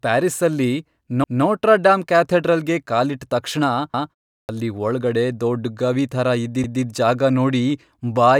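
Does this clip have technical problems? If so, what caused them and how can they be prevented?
Yes. Overlapping chunks appear at 1.24–1.44 s (just before "ಡಾಮ್ ಕ್ಯಾಥೆಡ್ರಲ್ಗೆ ಕಾಲಿಟ್ಟ್ ತಕ್ಷಣ"), 3.94–4.14 s and 6.64–6.84 s, every 2.7 s. Each new 2.5 s block begins 200 ms before the previous one ended, so that stretch plays twice as a stutter. A waveform shows a repeated 200 ms segment at each join. Chunk boundaries should be aligned so consecutive blocks abut exactly without overlap.

A clipped start after a pause occurs at 4.45–4.49 s, where about 39 ms is missing from the onset of "ಅಲ್ಲಿ ಒಳ್ಗಡೆ ದೊಡ್ಡ್ ಗವಿ" after a 0.39 s silence. The output device likely dozed during the gap and woke late. The waveform jumps abruptly from flat with no rising attack. Disabling the device's idle power-saving would prevent this.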